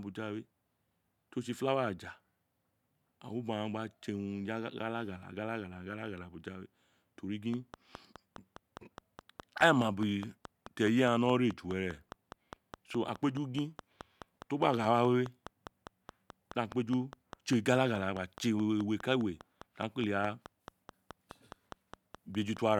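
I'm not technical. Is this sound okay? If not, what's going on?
No. From about 7.54 s to 22.58 s there is a train of clicks: a steady ticking of roughly five clicks per second, around seventy in all, each sounding much the same and evenly spaced, audible over the speech and in the pauses too. That regular, repeated pattern is what sets it apart from random crackle or a one-off pop. The likely cause is electrical interference from nearby equipment or a faulty connection or power supply.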